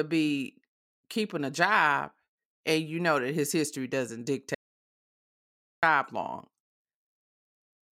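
At about 4.55 s the speech just drops out to silence, and it doesn't come back until 5.83 s, so roughly 1.28 s is simply gone. It's dead silent in there, not even room tone, which is why it feels so abrupt at both edges. That points to the input going away for a moment, likely a loose connection, a link hiccup or a stray mute, while the recorder kept writing nothing.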